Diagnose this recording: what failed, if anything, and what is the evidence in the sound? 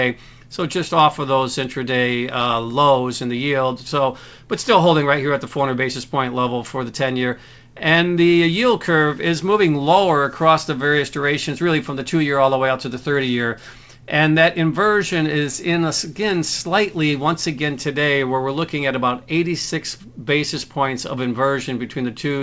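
Nothing has failed: the signal shows the ordinary character of a call path, with no energy above 8 kHz, which points to a wideband call codec along the lines of G.722 at 64 kbps, carrying its normal coding noise through the jitter buffer without any break or disturbance.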